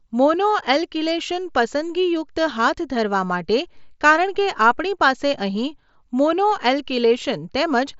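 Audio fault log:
The speech comes through a wideband Bluetooth mSBC headset codec link, with nothing above about 7.7 kHz and only the light graininess on louder sounds that this codec leaves at its fixed rate, and no faults can be heard.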